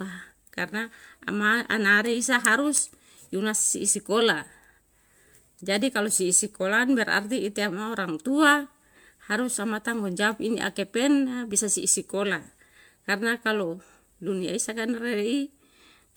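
Throughout the speech, the sound has a swirly, smeared, hollow quality beyond what 128 kbit/s MP3 alone would give, with blurred attacks. This is likely generation loss: roughly seven encode passes on shifting frame grids, each adding quantisation noise and spectral holes, with content extending to about 20.1 kHz.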